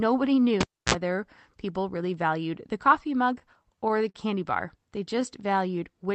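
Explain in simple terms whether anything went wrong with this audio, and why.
Three things went wrong in this speech recording.

From 0.61 to 0.94 s there is a cable pulled and plugged in. A pop, about 0.29 s of near silence, a short 60 Hz mains buzz lasting 52 ms, then another pop. The buzz and paired pops set it apart from an ordinary network dropout, which would just go quiet.

Between "valued the coffee mug" and "candy bar", from 3.39 to 4.16 s, there are repeated stalls (stutter). Late network data left the receiver waiting eight times, the longest about 42 ms, and it stretched the last sound to fill each wait. No speech is lost, which distinguishes this from packet loss. It just hiccups.

From 5.15 to 5.58 s there is a jitter buffer slow-down. The receiver added about 36 ms by repeating tiny slices of sound, so speech plays at 93% speed with unchanged pitch. Unlike the stutter, this is one smooth drag rather than separate hiccups.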